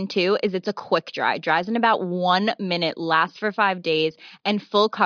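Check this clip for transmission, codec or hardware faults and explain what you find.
Nothing turned up here: listening closely, there's no sign of any transmission, codec or hardware trouble in this bit of speech.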